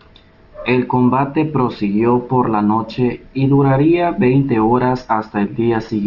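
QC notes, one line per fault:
Throughout: aliasing. The sample rate was dropped without an anti-alias filter, which fits a 12 kHz rate, so content above 6 kHz folds back as faint, gritty, unrelated tones about 35 dB down.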